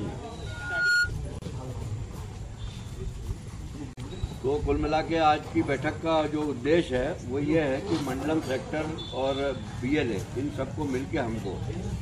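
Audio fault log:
0.46–1.12 s, loudspeaker feedback squeal: a single tone at 1.4 kHz swells over roughly 0.4 s to about 5 dB above the sound, as the microphone–loudspeaker loop gain passes one at that frequency. On a spectrogram it is one bright horizontal line that thickens as it rises.
1.39 s and 3.93 s, gaps at joins of encoded pieces: silences of 33 ms and 39 ms cut into continuous sound, left by encoder start delay and last-frame padding kept at each join. The waveform drops abruptly to flat, slightly smeared edges, then resumes where it stopped.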